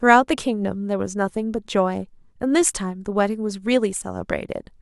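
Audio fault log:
Nothing to log here, since no faults turn up anywhere in this short bit of speech.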